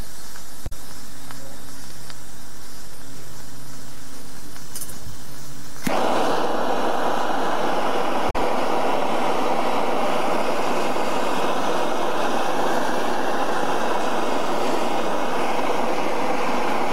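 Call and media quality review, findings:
DC offset, whole clip. Not audible; baseline sits off zero throughout, so the waveform rides asymmetrically about the centre line. Spectrogram shows a steady band at 0 Hz. Probable component: capture or input stage; costs headroom on one polarity.

Damaged data in a compressed stream, 0.64–0.73 s. Short glitch, about 90 ms. Decoder misreads corrupted frames, loses sync, resyncs at next header. Waveform shows a discontinuity.

Same fault, 8.27–8.36 s. Same length, about 90 ms. Points to a corrupted stream or file segment rather than the playback device.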